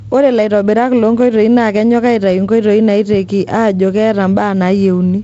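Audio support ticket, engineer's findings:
Nothing stood out on listening to this speech; the G.722 wideband telephone coding at 48 kbit/s carries it with content reaching to about 7.7 kHz.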